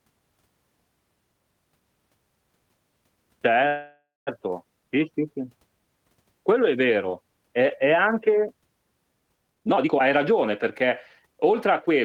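This speech clip has a call audio freeze from 3.67 to 4.29 s, just before "sì sì". The last sound is drawn out as a fading buzz or hiss for about 0.6 s, including about 0.18 s of silence. Delayed packets likely emptied the jitter buffer. Speech then resumes where it stopped, with nothing lost. Two jitter buffer speed-ups follow. From 9.48 to 10.31 s the speech runs at 158% speed, with about half a second cut out. From 11.26 to 12.03 s it runs at 106%, with roughly 50 ms removed. Pitch stays the same in both, but the speech sounds hurried.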